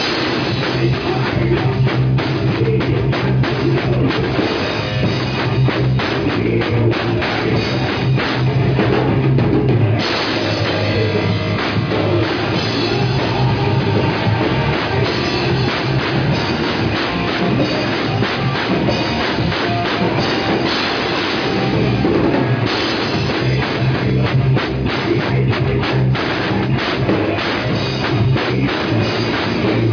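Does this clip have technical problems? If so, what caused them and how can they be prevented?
No, the signal shows no technical faults and needs no preventive measures.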